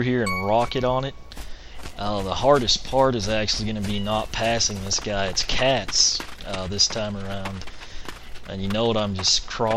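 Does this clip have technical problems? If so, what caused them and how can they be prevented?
No, there's nothing here to fix: no faults are audible anywhere in the recording, so there's no cause to trace and no prevention needed.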